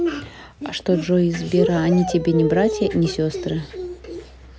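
No technical faults can be heard anywhere in this speech recording. No working path is singled out for comment.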